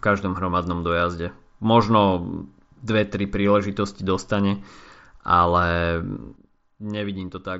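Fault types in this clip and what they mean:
Sudden gain jump: at 6.36 s, just after "tri príležitosti dostane ale", the speech and the background noise drop together by about 9 dB in one step and stay lower to the end, likely from a digital gain change applied without a ramp.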